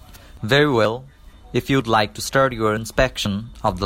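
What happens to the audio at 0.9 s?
Right around 0.85 s there's a tiny skip: about 20 ms of sound goes missing and the audio on either side is butted together with no gap of silence, so it jumps forward a hair. That's most likely audio missing between chunks, where the recorder or processor handles the stream in blocks, which fits half-second chunks here, and drops a sliver while closing one block and opening the next.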